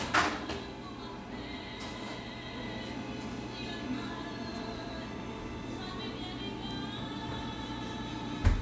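No technical faults can be heard anywhere in the audio.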